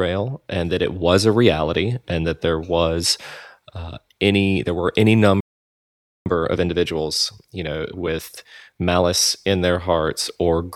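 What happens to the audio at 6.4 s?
A time-compressed catch-up runs from 6.26 to 9.26 s, starting after "any there were any" and ending before "in their". Here the player clears a backlog by splicing out tiny slices and cross-fading the joins, so the speech plays about 1.25 times faster at unchanged pitch, sounding hurried.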